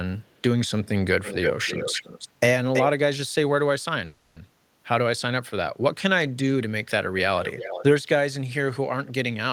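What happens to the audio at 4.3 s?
At 4.3 s the sound is in the middle of a call audio freeze that runs from 4.05 to 4.37 s. The last sound is stretched into a fading buzzy hiss that fills the gap with no silence, most likely because delayed packets let the jitter buffer run empty. Unlike packet loss, nothing is cut out: the audio resumes exactly where it stopped, about 0.31 s later than it would have.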